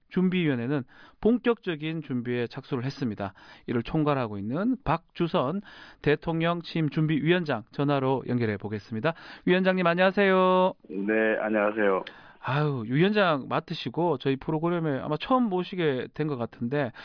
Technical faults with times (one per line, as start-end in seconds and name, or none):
none